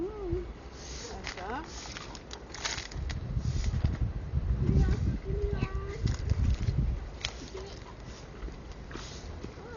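Throughout the recording, the sounds have likely passed through Dolby Digital compression at a very low rate, something in the region of 40 kbps. Starved of bits, the encoder cut the band and left many frequency lines with no detail, which the decoder filled with noise. Nothing comes through above 6.9 kHz, so everything sounds dull and muffled, and a rough, fluttering grain hangs around any steady tones.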